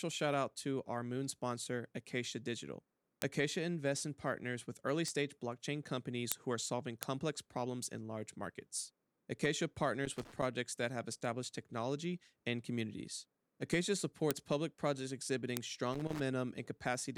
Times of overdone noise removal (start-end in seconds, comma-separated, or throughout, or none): none